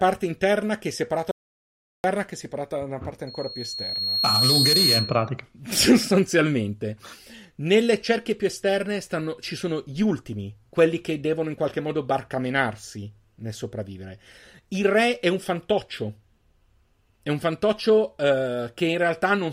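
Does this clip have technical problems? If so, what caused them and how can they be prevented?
Yes. From 1.31 to 2.04 s, right after "interna che è separata", the speech stops dead and the gap is silent, with no room tone at all. About 0.73 s of audio is simply missing, and the speech resumes with "che è separata da". This is an audio dropout to silence, likely from the input signal being lost briefly, through a loose connection, a link failure or an accidental mute, while the recorder kept writing silence. Prevent it by securing cables and wireless links, locking out mute controls, and monitoring the recording input live.

From 3.27 to 5.29 s, just after "separata da una parte", a single tone at 4.3 kHz swells over about a second and a half until it sits around 5 dB above the speech. This is loudspeaker feedback squeal: the microphone picked up a loudspeaker it was feeding, and at 4.3 kHz the loop gain exceeded unity, so that frequency kept reinforcing itself. 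Prevent it by keeping microphones behind and away from loudspeakers, lowering monitor gain, and notching the ringing frequency with an equaliser.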